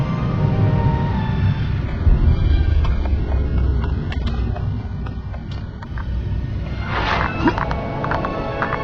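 At 1.86 s the sound suddenly thins out, with no gap or dropout. That's an adaptive stream switching to a lower bitrate, probably because the connection slowed. Until 5.86 s the treble has a synthetic, swirly sheen, with codec artefacts much more audible. The character fits a drop from a decent AAC stream to a very low-rate HE-AAC one. Then it snaps back just as abruptly.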